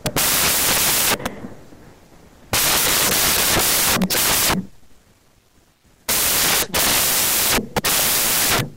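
Samples built from the wrong bytes run through the whole clip, from the first moment to the last. Each sample has been assembled with its bytes misplaced, whether shifted by one, swapped in order or read on the wrong alignment, so the rapidly fluctuating low-order bits end up carrying most of the value. The speech comes with loud, harsh broadband noise, close to white on the louder sounds.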